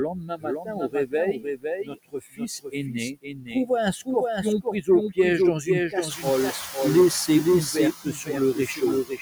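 A speech recording carries a second copy of itself trailing by roughly half a second, a few decibels quieter than the original. It is full-band and dry, with no decay or room colour, so it sounds like a flat, out-of-step repeat rather than an echo. This is a doubled audio track, most likely from the same signal reaching the mix twice, once through a slower path or through an edit that left two misaligned copies. Throughout, the background pumps in and out, sinking by about 13 dB in the gaps and rising again under the speech. These are noise suppressor artifacts: the suppressor attenuates, frame by frame, every band it judges to be steady noise. The room noise, a genuine part of the recording, rises by about 15 dB near 6 s and sits only about 13 dB below the speech. The suppressor also eats into the speech itself. Soft consonants, word endings and quieter stretches sound swallowed or faint from 0.13 to 3.7 s, where about two seconds in total is hit, with drops up to about 21 dB. 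Briefer losses follow from 4.62 to 5.18 s (up to about 18 dB), 5.63 to 6.77 s (about 13 dB) and 7.27 to 9.2 s (up to about 20 dB). This is speech cut by the noise suppressor, which mistook those quiet parts for background.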